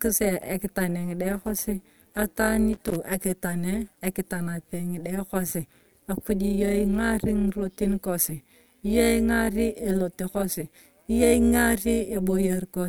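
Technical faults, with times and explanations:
Throughout: overlap-add ripple. The speech was cut into windowed frames and rejoined with overlaps that do not sum to a steady gain. The level rises and falls by about 11 dB once per frame, around 150 times a second. This gives a metallic buzz with extra tones around each note.
2.73 to 2.96 s: loose connector crackle. A worn or dirty contact made and broke the connection rapidly for about 0.23 s. The signal was chopped on and off at irregular moments. That is heard as a ragged burst of crackle and scratching.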